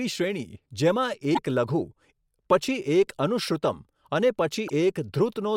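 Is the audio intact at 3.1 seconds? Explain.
Yes, at 3.1 seconds the speech plays through intact, with no audible dropout, click, distortion or other fault at that moment.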